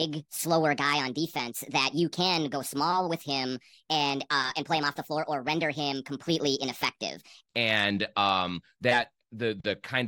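From 0.0 to 7.47 s, a section at the wrong speed plays 1.4 times fast, likely from a clock mismatch, making the speech high-pitched and hurried.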